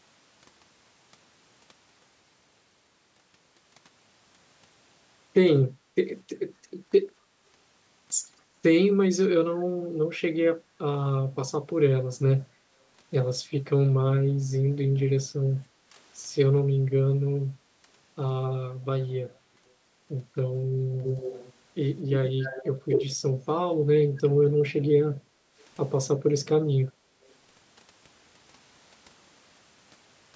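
Speech recorded through a call's microphone processing, with two kinds of fault. Background gated by the echo canceller appears as brief dips in the room sound at 5.76–5.87 s (about 7 dB), 7.26–7.37 s (about 9 dB), 15.64–15.94 s (about 9 dB) and 25.2–25.56 s (about 17 dB). Each lasts a tenth of a second to under half a second. The canceller clamps the microphone while the far end plays, then releases. Unlike a network dropout, only the ambience sinks, and nothing is repeated or garbled. Echo leak is heard at 21.02–21.53 s, 22.1–22.67 s, 22.89–23.16 s and, very faintly, 27.28–27.34 s as a copy of the speech trailing by 249 ms. It is about 10 dB and 15 dB down in the first two stretches, roughly as loud as the speech in the third, and far down at the last. The likely cause is a loudspeaker-side canceller letting part of its pickup through. The fixed 249 ms lag separates it from room reverberation, which smears continuously rather than returning a distinct delayed copy.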